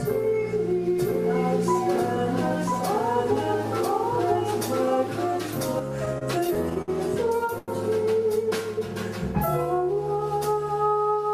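From 0.99 s to 5.79 s the audio is heard twice. This is a doubled audio track. A second full-band copy runs about one second behind the first. It is about as loud as the original. It has no decay and no room colour, so it is not an echo from a space. It starts and stops abruptly. The likely cause is a second capture through a slower path, or an edit that left two copies out of step.

Between 6.05 s and 6.90 s the sound stutters. These are repeated stalls. Packets arrived late or too slowly, and the jitter buffer kept running dry. Seven times the receiver held the last sound to bridge the wait. The longest hold is 61 ms. Together the holds fill 144 ms, about a sixth of the span. Nothing is lost. The passage just drags and catches.

At 7.58 s to 7.70 s there is one short stall from a late packet. The packet was not there when it was due, and the buffer emptied. The receiver stretched the last sound for 94 ms. 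Then it carried on from the same point. No audio is missing. A single sound is held too long, with a slight buzz or dip before the flow resumes.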